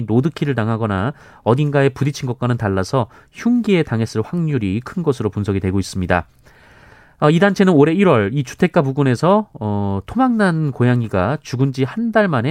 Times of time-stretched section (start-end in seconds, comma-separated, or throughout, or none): none